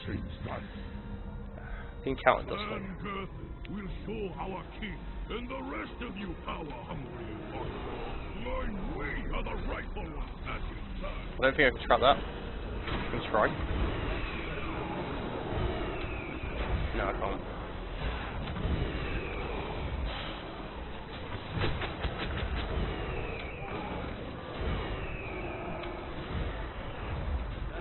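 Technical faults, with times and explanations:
No technical faults detected on this listen; nothing to log.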